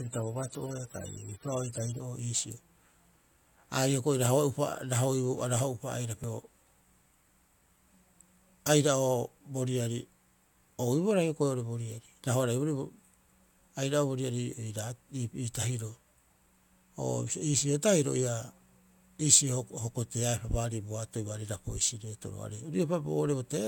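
For the first 2.0 s the sound is dull and smeared, with nothing above 17.2 kHz, the treble thin or artificial and codec artefacts prominent. At 2.0 s the quality jumps abruptly to a fuller, cleaner sound. This is an adaptive stream starting at a low bitrate. The player began on a lean version, fitting something like 32 kbit/s AAC, then switched to a richer one around 96 kbit/s once it had gauged the connection. Unlike a network dropout, the switch happens with no gap.

At 6.24 s and again at 16.14 s the audio skips. About a tenth of a second of material vanishes, and the two sides are butted together with no silence between them. The regular spacing of roughly 10 s points to audio missing between chunks, likely from a recorder or processor losing a sliver each time it closes one chunk and opens the next. The absence of any silence and the clockwork spacing set this apart from random packet loss or a muted dropout.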